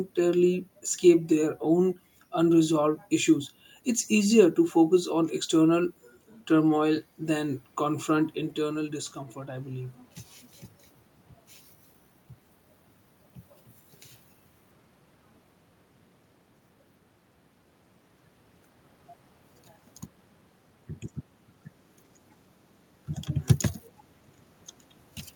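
Automatic gain rising, 7.2 to 10.04 s, after "focus on external turmoil": gain control judged the input quiet and raised it about 4 dB, swelling voice and room noise.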